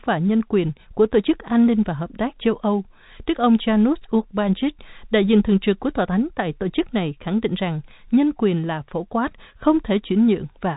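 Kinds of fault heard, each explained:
No fault can be heard in this speech. It comes through G.711 telephone coding as ordinary phone-line audio, with nothing above 3.8 kHz and at most a faint layer of coding noise.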